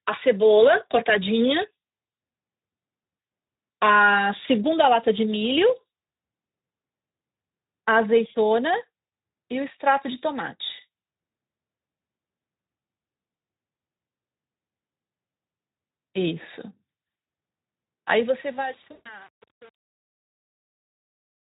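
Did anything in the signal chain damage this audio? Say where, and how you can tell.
Yes. There are two separate problems. The first is VoIP packet loss concealed by the speech codec, on the network side. There's a brief dropout at 9.07 to 9.09 s and a longer one from 18.91 to 19.26 s. In each, the Speex decoder fills the gap by stretching its last pitch and filter into a fading smear. The longer gap leaves the sound weak and smeared for a moment after it ends.

The second is truncation distortion on a fade, at the sample-format stage. The fade-out runs from about 18 s to the end at 21.5 s. From 18.07 s onward the tail goes gritty, with no dither to smooth it. That sounds like the fade was rendered at only around 7 bits, so the quiet end collapses into a few coarse steps.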